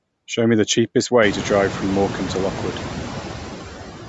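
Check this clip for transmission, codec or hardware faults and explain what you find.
Two faults run through the whole clip, a noise suppressor and codec damage, the codec damage plainly audible over the speech.

Noise suppressor artifacts persist throughout: the suppressor pulls steady-noise bands down by about 5 dB per frame, so once the room noise rises around 1 s, its residue swells under speech.

Bluetooth LC3 compression is the likely source of the grainy, breathy edge throughout; upper bands are coarsely quantised and noise-filled, consistent with roughly 48 kbps in 7.5 ms frames, within an 8 kHz band.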